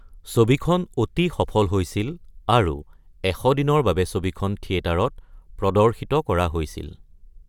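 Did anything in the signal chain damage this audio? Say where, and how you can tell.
No, nothing in the signal chain has left audible damage on this speech recording. No stage from capture through to playback shows a fault that can be heard.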